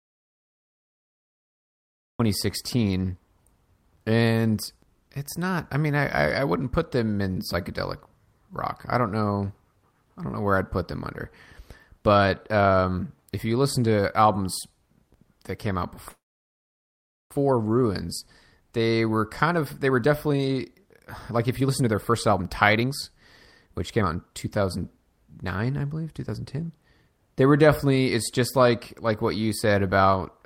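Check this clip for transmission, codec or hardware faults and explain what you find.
Three kinds of fault are present. There is an opening dropout, a call freeze, and two stretches of jitter buffer speed-up.

Audio dropout to silence: from the start to 2.2 s, the speech is absent. It is dead digital silence with no room tone. A lost input is the likely cause.

Call audio freeze: from 16.09 to 17.32 s, a brief tail fades into about 1.13 s of silence. Stalled packets likely emptied the jitter buffer. Speech resumes where it stopped, with nothing lost.

Jitter buffer speed-up: from 18.65 to 22.91 s, speech runs at 119% speed, and from 23.66 to 27.43 s at 110%. Pitch is unchanged. Clipped pitch periods remove roughly 0.7 s and 0.4 s, so the speech sounds hurried.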